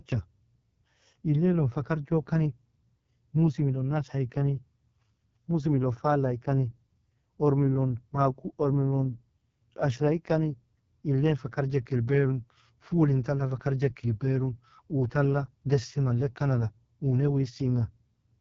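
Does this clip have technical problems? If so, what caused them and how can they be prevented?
Yes. AMR wideband (HD Voice) codec artefacts run throughout: the speech sounds heavily rough and raspy, and nothing reaches above 7.3 kHz, which fits the codec's lowest 6.6 kbit/s mode, too few bits for its pulse-driven vocal tract model. Running the codec at 12.65 kbit/s or higher would prevent this.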